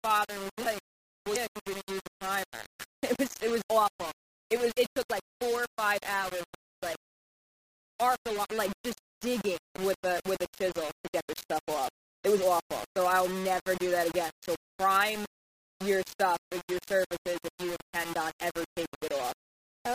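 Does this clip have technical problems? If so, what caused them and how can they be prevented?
Yes. Low bit depth without dither runs throughout: the whole clip sounds grainy and gritty, with distortion that follows the sound and a noise floor only around 15 dB below it. This is likely from rounding to about 4 bits with no dither, so quiet passages break up into coarse steps. Keep at least 16 bits, and apply dither before any reduction in bit depth.

Damaged data in a compressed stream appears from 1.32 to 1.37 s as a short blip. Corrupted bytes there made the decoder misread the affected frames and lose sync until it found the next valid frame header. Use checksummed transfer and storage, and verify files before decoding.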